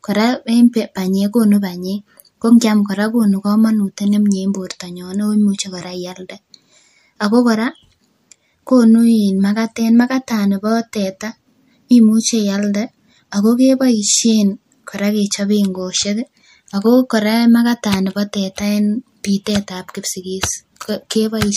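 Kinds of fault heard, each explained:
Pre-echo: at 2.59 s, between "banyek kokonu banyek ko" and "kora kokonu komonut nemnye", and again from 19.44 to 19.46 s just after "teta en", a brief hiss of about 14 dB and then about 10 dB precedes a sharp speech onset by roughly 20 ms. The transform codec spread quantisation noise across a whole block, which fits a block of around 36 ms with no switch to shorter blocks, so noise sized for the attack leaks into the quiet before it and softens that onset.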